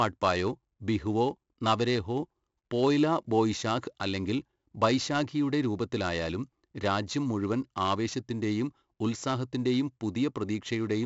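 Speech clip with 4-bit ADPCM compression running throughout: each sample is coded as a coarse 4-bit step from a prediction, leaving gritty, level-following hiss on louder passages and smeared attacks where the step size lags. The heavy damage and nothing above 7.7 kHz point to 64 kbps at a 16 kHz sample rate.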